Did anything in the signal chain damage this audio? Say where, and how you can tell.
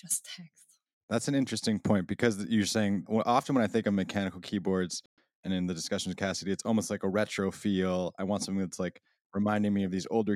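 Yes: a playback stall, likely the player starving for data, silences the speech for 120 ms from 5.06 s, between "think of mechanical keyboards" and "and in the discussion".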